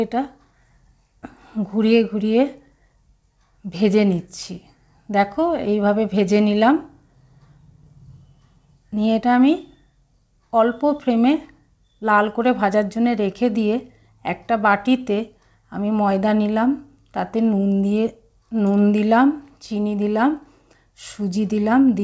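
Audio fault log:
Nothing stood out on listening, and the audio carries the expected high-frequency ceiling of a G.722 call path, with no content above 8 kHz.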